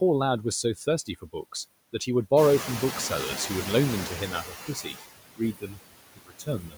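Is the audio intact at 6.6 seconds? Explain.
No. From 6.16 s to the end of the clip, the speech sounds swallowed and faint. This is speech cut by the noise suppressor, which mistook it for noise and pulled it down by up to about 22 dB. Throughout, noise suppressor artifacts are present as the suppressor cuts what it judges steady noise by about 20 dB, so the noise sinks between the words and rises under them.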